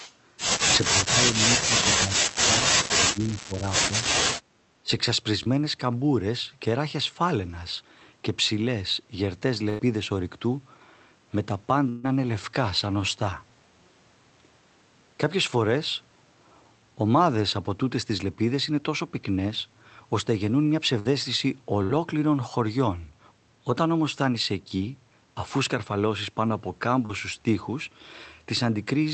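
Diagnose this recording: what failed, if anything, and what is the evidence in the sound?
Call processing, echo leak. From 0.0 to 0.13 s a faint delayed copy of the speech sits behind the talker. It lags by about 375 ms and sits about 20 dB below the main speech. The far end's echo canceller likely failed to remove all of its own loudspeaker pickup from the microphone. The leftover was sent back down the line. It is brief, so it reads as a ghostly scrap rather than a full repeat.

Call processing, speech suppressed in double talk. The talker's speech dips sharply at 0.9 to 1.22 s, 1.48 to 2.5 s, 2.87 to 3.72 s and 4.82 to 4.9 s. The deepest drops are roughly 20 to 30 dB. Parts of syllables thin out or vanish. The likely cause is both sides talking at once. The echo canceller could not tell the local talker from loudspeaker echo, so it pulled everything down.

Call processing, background gated by the echo canceller. 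From 4.43 to 4.54 s the room sound drops by about 8 dB for roughly a tenth of a second. Then it comes back. The canceller clamped the microphone while its loudspeaker was active. The ambient bed ducked with it.

Network, short concealed packet loss. Brief smears occur at 5.43 to 5.47 s and 24.77 to 24.81 s, each about 20 ms. A longer one of about 40 ms occurs at 27.05 to 27.11 s. Audio failed to reach the decoder in time. The receiver extended the last sound to cover each hole and then blended back. The result is a small smear or wobble. A short consonant may be lost.

Network, burst of packet loss. Longer gaps occur at 9.69 to 9.81 s (about 100 ms), 11.89 to 12.05 s (about 140 ms), 20.99 to 21.07 s and 21.83 to 21.91 s (about 60 ms each). The decoder held the last sound as a buzz or hiss and faded it. Speech then resumes further on, with the stretch in between gone. The band limit near 8 kHz fits the Opus call path and is not a fault.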